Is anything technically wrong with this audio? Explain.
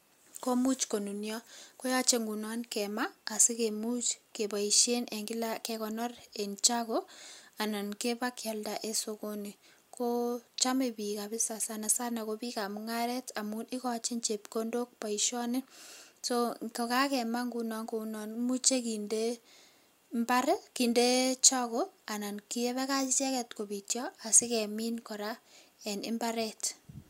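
No, no technical faults.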